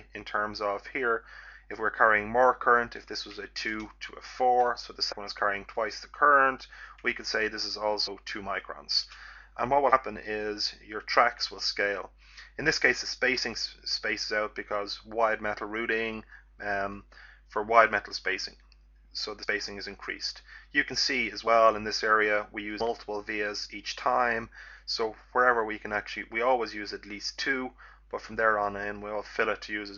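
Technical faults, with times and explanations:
5.11–5.13 s, 8.06 s, 9.92 s, 19.43–19.45 s, 21.46 s and 22.79 s, compressed frames skipped: the sound jumps forward by roughly 30 to 150 ms each time, in steps of whole 26.1 ms frames. Overlapping frames smear each join into a soft blip, not a sharp click or a silent dropout.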